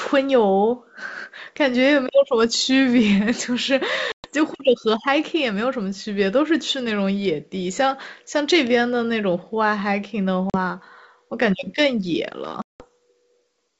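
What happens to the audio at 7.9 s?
Nothing goes wrong at 7.9 s; the speech passes through intact there, carried by G.722 wideband telephone coding at 64 kbit/s with at most a faint trace of the codec.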